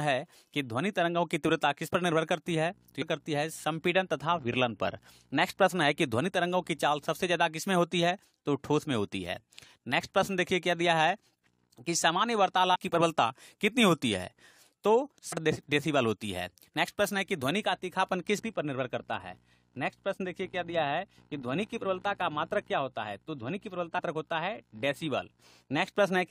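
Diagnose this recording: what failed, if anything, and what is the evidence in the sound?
Damaged data in a compressed stream, at the codec stage: short glitches at 3.01 s, 12.74–12.76 s, 15.31–15.33 s, 18.38–18.40 s and 23.98–24.00 s. Corrupted bytes make the decoder misread those frames and lose sync until it finds the next valid frame header, leaving each brief blip in the sound.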